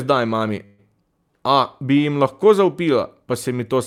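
A speech clip with a call audio freeze from 0.65 to 0.80 s: the last sound is stretched into a fading buzz for about 130 ms, likely from delayed packets draining the jitter buffer. Unlike a dropout, nothing is lost; the speech resumes where it stopped, 129 ms later.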